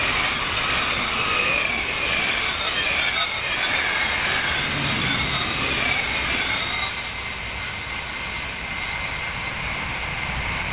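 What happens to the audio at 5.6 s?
At 5.6 s you're hearing aliasing, and it's there for the whole clip, not just that moment. The sound seems to have been dropped to an 8 kHz rate without filtering first, so anything above 4 kHz folded back down as gritty, metallic tones sitting not far below the real content.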